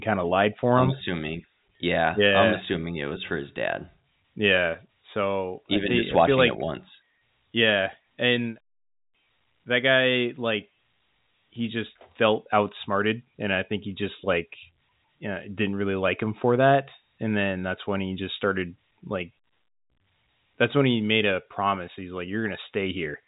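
No technical faults can be heard in the speech, which comes through G.711 A-law telephone coding at 64 kbps with nothing above 3.8 kHz, the narrow band that format always imposes.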